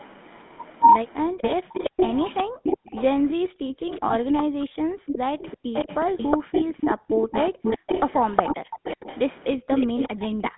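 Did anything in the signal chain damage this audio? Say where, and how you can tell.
Yes. At the codec stage the whole clip passed through the GSM full-rate codec at 13 kbps. The regular-pulse excitation keeps only a sparse set of samples to drive a vocal-tract model, which gives the speech a plainly audible buzzy, gravelly roughness inside a narrow 150 Hz to 3.5 kHz line band.

In call processing there is an echo leak from 1.17 to 10.5 s. A copy of the far end's audio trails by about 367 ms at roughly 10 dB below the speech. The likely cause is a loudspeaker echo canceller that failed to remove everything its microphone picked up and sent the remainder back.

The background is also gated by the echo canceller between 1.59 and 7.62 s, and again from 9.57 to 9.68 s. The canceller clamped the microphone while its loudspeaker played, so the room sound ducks by as much as about 40 dB. Over the first span those drops add up to roughly one and a half seconds before the room returns.

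On the network, lost GSM frames appear from 4.08 to 4.13 s as a short rough, metallic ring lasting about 20 ms, which fits a single dropped frame. The decoder filled the gap by repeating the last good frame's parameters.

Speech is suppressed in double talk at 4.53 to 4.66 s and 10.13 to 10.31 s. The voice dips sharply, by around 40 dB, in pieces lasting a fraction of a second. This is likely the canceller failing to separate its own talker from the loudspeaker echo when both sides spoke, and turning everything down.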